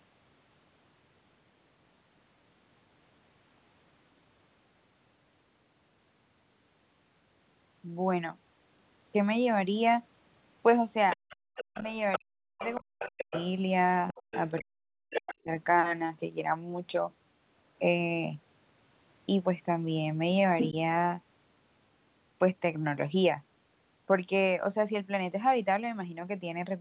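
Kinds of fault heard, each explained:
Other side's voice leaking through: A second voice sits about 10 dB under the talker from 11.1 to 13.5 s and 14.1 to 15.34 s, likely unremoved loudspeaker echo. A louder scrap comes at 20.6 s.
Background gated by the echo canceller: The room sound drops by about 40 dB for 70 ms, from 11.48 to 11.55 s, as the canceller clamps the microphone.
Speech suppressed in double talk: From 11.74 to 13.33 s and 14.13 to 15.5 s, the talker dips deeply in pieces, about a second in all each time, likely both sides speaking at once.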